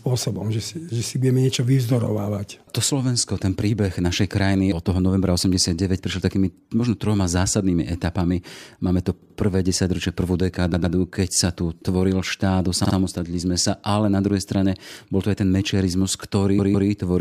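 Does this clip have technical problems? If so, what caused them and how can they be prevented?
Yes. Four short stutters occur where a fragment of speech plays three times in a row: at 9.21 s just before "desaťročie prvú", at 10.73 s right after it, at 12.84 s after "sa tu tvoril štát", and at 16.58 s. The repeated blocks are 78, 104, 52 and 157 ms long, consistent with whole compressed frames of about 26 ms. This is repeated frames: a run of frames was written or sent more than once, so the decoder replays it and the clip grows by the repeated time. Prevent it by discarding duplicate frames by sequence number or timestamp before decoding.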